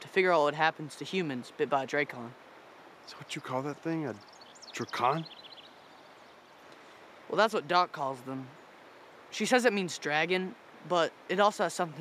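Nothing stood out on listening; no technical fault could be heard at any point.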